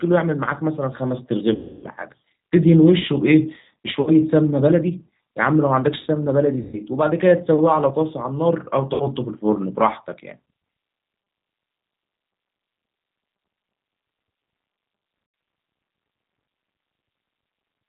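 The whole clip is speech run through the G.729 codec at 8 kbit/s, and it's plainly audible: there's no top end above 4 kHz, and the voice has that slightly rough, synthetic edge you get when speech is rebuilt from a vocal tract filter, a pitch predictor and a handful of pulses per frame rather than sent as a waveform.

On top of that there are five stretches of VoIP packet loss concealed by the speech codec. The longest runs from 1.55 to 1.86 s, covering 280 ms of missing audio. Shorter ones follow at 4.01 to 4.11 s, 6.61 to 6.80 s, 8.94 to 9.08 s and 15.26 to 15.34 s. In each gap the decoder keeps repeating its last pitch and filter at falling gain, so the sound smears into a buzzy tone or a coloured noise that fades. The losses come in 20 ms steps, which fits 20 ms packets. Because each frame builds on the previous one, the voice stays weak or distorted for tens of milliseconds or more after each gap.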